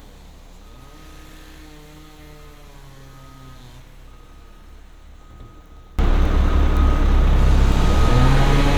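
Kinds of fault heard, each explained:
One channel inverted: from the start to about 5.99 s the summed sound drops by about 27 dB, collapsing to a faint residue before returning to full level. The likely cause is reversed polarity on one stereo channel, so material common to left and right cancels when the two are added to mono, leaving only the small difference between them.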